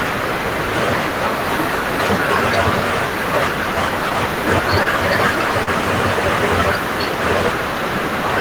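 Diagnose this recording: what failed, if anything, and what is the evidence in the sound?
Network: short stalls from late packets at 4.83 and 5.64 s stretch sound 27 and 35 ms, then resume intact, nothing skipped, unlike packet loss.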